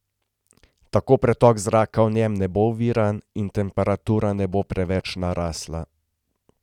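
Speech recording with a burst of GSM signalling interference from 4.38 s to 5.57 s, starting just after "bo oviran in temperatura". A short, galloping dit-dit-dit of brief buzzes sits roughly 25 dB below the speech, repeating at about 217 Hz. That rate is the signature of a nearby 2G handset exchanging signalling bursts with the network. The audio circuitry rectifies the RF pulses into audible clicks and buzz.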